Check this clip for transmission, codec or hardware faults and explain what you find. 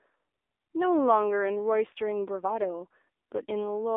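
Two faults are audible: narrowband mobile coding throughout, and a short burst of bit-error damage near the end.

The AMR narrowband mobile codec is present from start to finish. At 7.4 kbps the codec rebuilds the speech from a vocal-tract model driven by sparse pulses, so the voice sounds buzzy and somewhat synthetic, and the line band of 300 Hz to 3.6 kHz removes all the air and sibilant detail above it. Plain band-limiting alone would sound dull but natural. Here the artificial, reedy buzz is what points to the codec.

AMR bit errors occur at about 3.08 s. Flipped bits in the weakly protected part of a few frames put the excitation pulses in the wrong places and disturb the fine pitch, gain and spectral values. The result is a brief hoarse, gargly scratch, with an error rate of something like 7 percent. Pitch and loudness stay roughly intact. A dropout or concealment gap would leave a silence or a smeared repeat instead of this rough distortion.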